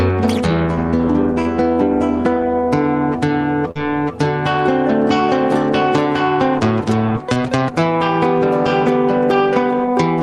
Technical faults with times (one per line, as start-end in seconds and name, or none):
1.41-1.47 short concealed packet loss
3.71-3.77 short concealed packet loss
7.33-7.38 short concealed packet loss